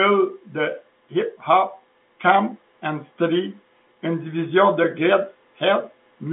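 No technical faults can be heard in the speech, which sits in the ordinary telephone band of 200 Hz to 3.6 kHz with nothing above 3.8 kHz, consistent with G.711 A-law telephone coding at 64 kbps.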